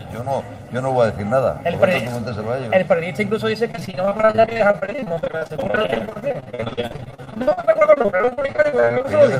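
A hollow, phasey colouring sits on the sound from start to finish, as if heard down a tube, with certain frequencies pulled out at fixed, evenly spaced points. This is channel delay causing comb filtering. One channel runs late by roughly 1.5 ms relative to the other, and when the two are summed to mono the shared content cancels in regular notches, the first falling somewhere around 300 Hz and the rest repeating upward from there.

From 3.71 s to 9.09 s the sound turns choppy, taking on a stuttering quality with pieces dropping out over and over. This is repeated packet loss. Data went missing or arrived late many times in close succession, and each hole was patched by stretching the preceding sound forward. The gaps are short, the longest about 52 ms, but they come so densely that nearly half of this stretch is concealment rather than real audio.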